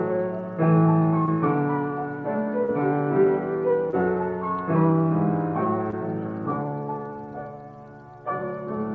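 Short concealed packet loss hits at 1.26–1.29, 2.65–2.70, 3.90–3.94 and 5.90–5.95 s. Each time about 20 ms went missing and the receiver papered over it, leaving a quick smear or wobble, all heard through a call codec band-limited at 8 kHz.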